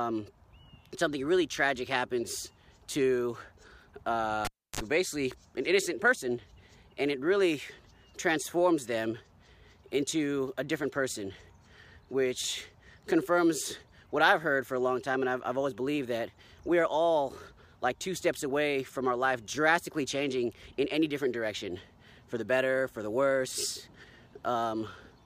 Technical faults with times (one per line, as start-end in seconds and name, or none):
4.45-4.80 cable pulled and plugged in